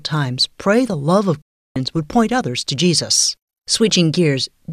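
It's a speech clip, and there's a digital broadcast dropout running from about 1.42 s to 1.76 s. Right after "pray the love of" the sound fades out in roughly 3 ms and goes silent for about a third of a second, coming back at "would point others to". That's the receiver muting while frames were missing or failing their checks. The gap length fits a short run of lost frames, and whatever was sent during it is gone.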